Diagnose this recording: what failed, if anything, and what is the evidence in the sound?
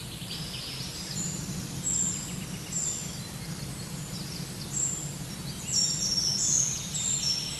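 Between 3.12 and 4.54 s the audio hurries 8% at unchanged pitch: jitter buffer speed-up, trimming pitch periods to shed about a tenth of a second.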